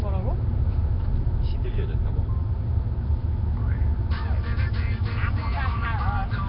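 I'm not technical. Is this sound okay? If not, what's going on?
No. Nellymoser compression, present throughout: the sound is rough, hissy and smeared, with no treble above 5.3 kHz, likely from an old Flash-era codec squeezing it too hard.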